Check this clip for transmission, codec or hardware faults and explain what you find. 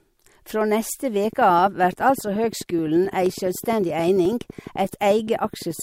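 Two faults are present: a sustained train of clicks and two small skips from overlapping stream segments.

Train of clicks, 1.2 to 5.8 s: about fifty evenly spaced, near-identical pulses arrive at 11.6 per second, peaking roughly as loud as the speech. This is likely interference from nearby equipment or a faulty connection or power supply, heard as steady ticking over the speech and through its pauses.

Overlap between stream segments, at 3.26 s and 4.25 s: two one-second segments carried overlapping time stamps, so the player discarded a few milliseconds of audio that wasn't really duplicated. The waveform jumps at each boundary, heard as a brief click or tiny skip one second apart.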